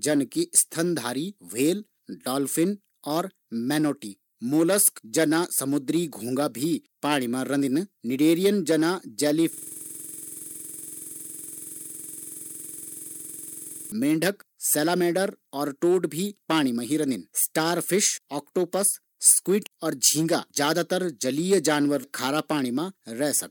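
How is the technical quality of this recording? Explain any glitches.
The recording has one serious glitch, a system hang loop from 9.53 to 13.92 s. The computer or driver stalled while the audio hardware kept replaying its ring buffer, so a single 46.44 ms slice, which fits a 2048-sample buffer, repeats at 21.5 Hz as a rapid mechanical stutter.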